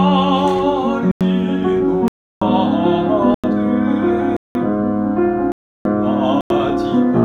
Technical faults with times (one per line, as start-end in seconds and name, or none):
1.11-1.21 block of digital silence
2.08-2.41 block of digital silence
3.34-3.44 block of digital silence
4.37-4.55 block of digital silence
5.52-5.85 block of digital silence
6.41-6.50 block of digital silence